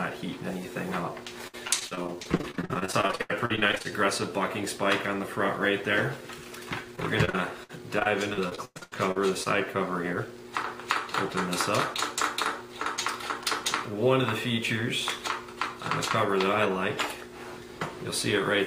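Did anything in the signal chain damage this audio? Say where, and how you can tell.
Yes: repeated packet loss (robotic sound) in the network at 1.47–3.92 s and 6.96–9.48 s. Gaps up to 104 ms are filled with repeated prior sound, which makes the audio choppy, with pieces missing.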